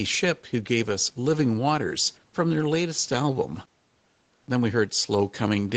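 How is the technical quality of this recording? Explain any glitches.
No glitches heard here.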